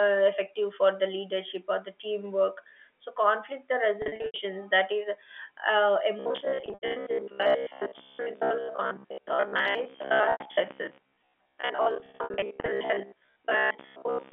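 First trouble shows up at 4.02 to 4.38 s: packet loss with pitch repetition. About 240 ms of audio goes missing, scattered across 360 ms, with the longest run at 80 ms. The losses fit 20 ms packets. The receiver papers over each hole by looping the last pitch period, so you get brief held, buzzy patches rather than clean dropouts. The same thing happens at 6.60 to 6.96 s (200 ms lost, runs up to 80 ms), at 10.32 to 10.40 s (a single 80 ms gap), and at 11.96 to 12.68 s, where 340 ms drops out over 720 ms in runs of up to 60 ms.

Starting at 6.20 s and running to the end, the sound also turns into robotic sound from repeated short buffers. A rigid, metallic buzz at about 67 Hz sits over everything and still loosely tracks the original. That pitch fits a 15 ms chunk being replayed over and over. Most of the time the software is repeating old audio instead of playing fresh material, most likely because new data isn't arriving often enough to keep the buffer fed. 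All of this rides on a narrow telephone band of roughly 250 Hz to 3.4 kHz from the G.711 A-law line.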